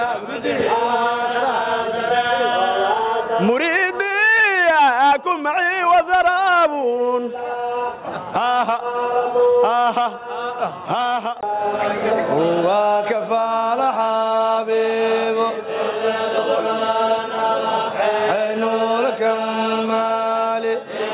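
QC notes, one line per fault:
No faults found.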